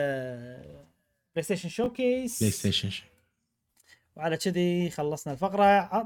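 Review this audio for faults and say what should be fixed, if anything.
A 10 ms chunk was delivered one chunk late, so two pieces swapped order at 1.84 to 1.86 s. The result is chunks out of order: a brief jumbled blip with three hard joins. Prevent it by sequencing chunks by timestamp in a jitter buffer before playback or writing.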